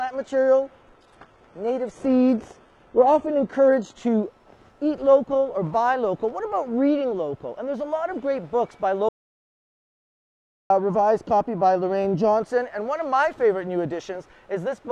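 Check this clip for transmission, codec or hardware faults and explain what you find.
Two faults are audible: a low-quality start and a later cut to silence.

From 0.0 to 4.0 s, an adaptive stream starting at a low bitrate: the player opened on a cheap version before measuring the connection. The top end sounds thin and partly synthetic, with stronger artefacts, which fits a 16 kbit/s HE-AAC stream, then jumps cleanly to fuller sound consistent with 96 kbit/s AAC-LC.

From 9.09 to 10.70 s, an audio dropout to silence: the input was likely lost while writing continued with silence. About 1.6 s of sound vanishes mid-flow into silence with no room tone, and whatever occurred then is gone.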